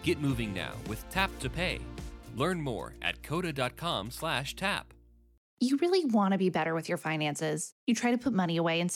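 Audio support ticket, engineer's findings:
Nothing stood out on listening, and no symptom was found to log against any component.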